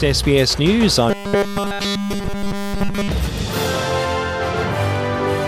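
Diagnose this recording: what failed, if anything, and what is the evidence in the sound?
From 1.10 s to 3.08 s the sound collapses into a rigid, metallic buzz fixed at 200 Hz: robotic sound from repeated short buffers. The stage is the driver or buffer. Fresh audio stopped arriving in time, and what filled the gap was essentially all repetition, likely a 5 ms block replayed over and over while the real material was skipped. That 5 ms period imposes the 200 Hz pitch. Unlike mains hum or an added tone, this buzz replaces the content instead of sitting beneath it, and it roughly follows the sound's loudness contour.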